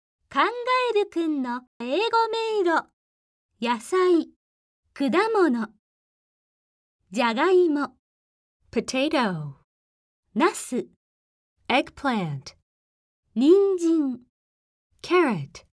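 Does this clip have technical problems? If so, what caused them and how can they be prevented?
No, nothing stood out as a technical problem on listening, so there is nothing here to trace or prevent.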